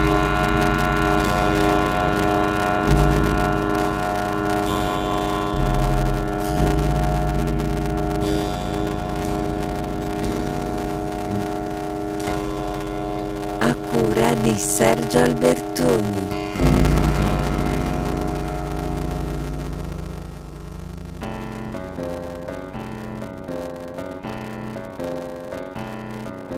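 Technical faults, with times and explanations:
Throughout, block size mismatch (padded): zero-filled gaps buzz at 93.8 Hz, fitting 512-sample reads; audio plays at 0.625 speed, timbre unchanged, unlike resampling.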